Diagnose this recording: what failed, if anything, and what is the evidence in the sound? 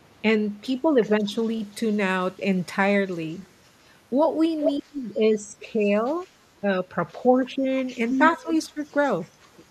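Call processing is the failing stage, and speech suppressed in double talk is the first fault. The speech dips between 0.82 and 1.32 s, 4.79 and 6.67 s, 7.31 and 7.67 s, and 8.37 and 8.78 s, by about 10 to 15 dB at the deepest, for around a second in the longest stretch. This is likely an echo canceller that could not tell near speech from far-end echo and turned both down. On a waveform the envelope sags, and a spectrogram shows harmonics fading in patches.

Echo leak is the second fault, also in call processing. A faint delayed copy of the speech follows it by 167 ms, between 1.44 and 1.96 s, between 3.08 and 3.48 s, and between 8.09 and 8.56 s. It sits about 35 to 40 dB below the speech early on and rises to about 20 dB below near the end. The likely cause is a far-end loudspeaker path whose residual echo was not fully cancelled and was sent back. A spectrogram shows ghost harmonic traces shifted 167 ms to the right.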